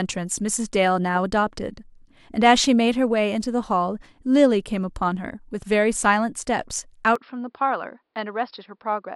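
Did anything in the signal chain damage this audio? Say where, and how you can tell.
Yes. At 7.16 s the speech loses everything above 5.4 kHz, drops about 5 dB and gains new background noise, likely an input switched to a poorer device rather than codec filtering.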